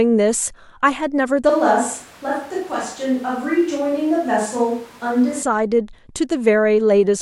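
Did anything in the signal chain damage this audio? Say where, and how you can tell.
Yes. From 1.50 s to 5.43 s the speech abruptly turns roomy and hollow, with thinner bass and a noise floor roughly 25 dB below the speech, then snaps back. This is likely a switch to a distant microphone at the capture stage, with the close mic's feed dropped. Level barely changes. On a spectrogram, low-frequency energy thins, reverb tails smear past each syllable, and noise fills the gaps. The waveform loses its clean silences between phrases.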